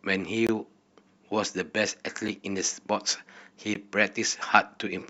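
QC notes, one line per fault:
0.47–0.49 s: block of digital silence. About 21 ms of the speech drops to silence and returns with no fade. It is heard as a brief hole.
2.28 s: block of digital silence. A 5.8 ms gap, which fits a 256-sample buffer left unfilled. It is too short to hear as a gap and comes across as a tick.
3.74 s: block of digital silence. A 14 ms dropout with abrupt edges, heard as a tick.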